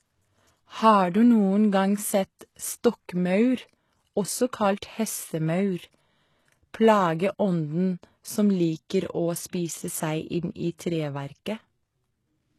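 Speech throughout, with nothing above about 12.3 kHz and a smeared, thin top end, which is low-bitrate audio saved at a high bitrate, most likely an HE-AAC encode near 16 kbit/s re-saved as 256 kbit/s MP3, so the bigger file can't restore what was lost.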